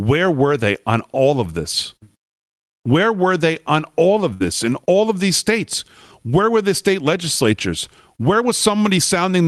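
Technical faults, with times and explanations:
4.33 to 4.43 s, burst of packet loss. Several packets in a row failed to arrive in time for playback. The receiver covered the hole by carrying the last sound forward for about 66 ms, turning it down as it went. That is why the speech smears into a held, fading tail. When real audio returns, about 60 ms of speech has been skipped. The next sound starts slightly later than where it should be.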